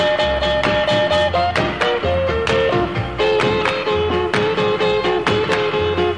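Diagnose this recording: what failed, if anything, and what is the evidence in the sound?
Nothing failed in this recording, and the sound gives no evidence of any fault at any stage.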